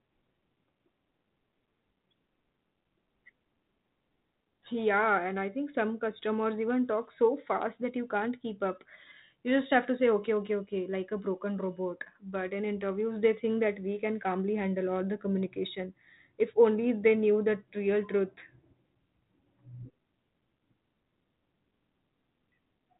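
No faults found in this speech clip, which comes through a G.726 ADPCM path at 32 kbit/s with content extending up to about 3.8 kHz.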